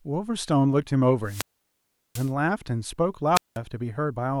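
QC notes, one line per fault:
1.22 to 2.34 s and 3.34 to 3.58 s, wireless microphone squelch dropout: hiss rises, then the speech drops into near silence for 0.74 s and 0.19 s. The microphone's radio signal faded until the receiver's squelch muted its output.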